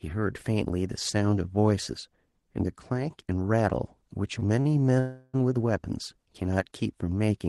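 At 4.39 to 4.43 s and again at 4.61 to 4.67 s, the speech briefly hangs, with a sound held slightly too long and a faint buzz. These are short stalls from a late packet: the jitter buffer ran dry, and the receiver stretched the last sound by about 17 ms and then 36 ms before resuming in the same place.

From 4.99 to 5.36 s, a longer call audio freeze holds the speech for about 340 ms as a fading buzz that ends in roughly 10 ms of near-silence before the speech resumes with nothing lost. The likely cause is packets delayed in transit, emptying the jitter buffer until they arrived.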